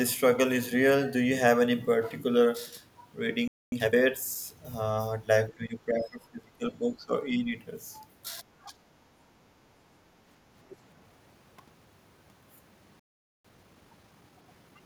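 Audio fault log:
3.48–3.72 s, playback stall: the speech stops dead mid-flow for about 0.24 s of silence. The likely cause is the player running out of buffered data or its output thread being held up, so nothing reached the output until it recovered.
3.72–3.96 s, time-compressed catch-up: straight after the gap the speech runs at double speed for about 0.24 s at unchanged pitch. The player clears its backlog by dropping small slices and cross-fading the joins, which gives the hurried sound.
5.57–7.13 s, speech suppressed in double talk: the voice ducks by as much as about 20 dB over roughly 1.5 s. The likely cause is an echo canceller that could not tell this talker from the far-end loudspeaker echo while both spoke, and so attenuated everything.
7.37–7.53 s and 8.42–8.97 s, speech suppressed in double talk: the same ducking returns, first as a shallow dip of about 5 dB lasting around 0.1 s, then a deeper cut of about 20 dB over roughly half a second.
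10.7–10.76 s, other side's voice leaking through: a brief, faint scrap of a second voice sits roughly 25 dB below the main speech. It likely comes from far-end audio played on this talker's loudspeaker that the echo canceller did not fully remove from the microphone.
13.00–13.45 s, playback stall: the output again drops to silence mid-flow, this time for about 0.45 s, likely from the same starvation or blocked playback thread.
13.45–14.83 s, time-compressed catch-up: the speech resumes rushed at 1.25 times normal speed for nearly 1.4 s with its pitch held. Trimmed, cross-faded fragments let the player drain the backlog.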